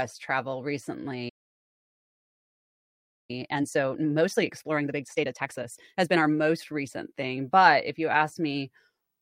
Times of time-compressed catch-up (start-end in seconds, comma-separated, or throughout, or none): 3.31-6.31